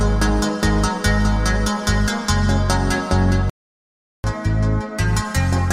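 At 3.50 s the sound halts mid-flow and stays silent until 4.24 s, a playback stall of about 0.74 s. The player was likely starved of data or blocked.

From 4.24 s to the end comes catch-up at higher speed: the player resamples its backlog at 1.15 times normal rate, so tempo and pitch rise together, by about two semitones. A plain pitch shift would leave the timing unchanged.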